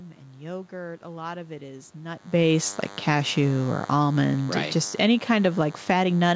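A DECT cordless phone buzz runs through the whole recording: a nearby DECT handset or base station fires a short radio burst every 10 ms, and the audio circuitry rectifies that burst into the signal. The result is a thin, steady buzz at 100 Hz, rich in harmonics, sitting roughly 25 dB below the speech. It never changes with the talking, so it is most exposed in the gaps between phrases.

From 2.25 s, just after "lot of it is", the automatic gain falling begins. The gain control judged the input too hot or its background noise too strong and pulled its gain down gradually, by about 8 dB, until 6.05 s. The speech and the room background sink together rather than the voice alone fading, which separates it from the talker shifting position just before, around 2.0 s. The whole sound seems to recede over nearly four seconds.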